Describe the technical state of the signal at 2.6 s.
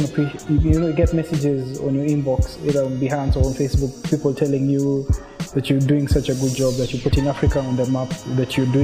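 Imaging from linear upsampling is present at 2.6 s, as it is throughout. The rate was raised from 22 kHz to 48 kHz by straight-line interpolation, dulling the top of the band and leaving a faint mirror image around 11 to 22 kHz, roughly 35 dB down, heard as a light metallic shimmer on bright sound.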